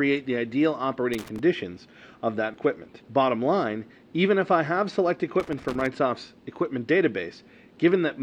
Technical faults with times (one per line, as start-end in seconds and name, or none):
1.13-1.39 loose connector crackle
5.40-5.86 loose connector crackle